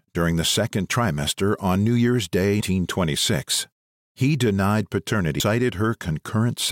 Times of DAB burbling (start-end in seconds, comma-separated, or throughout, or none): none